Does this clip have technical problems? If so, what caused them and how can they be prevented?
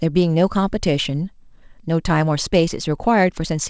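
No, there are no faults.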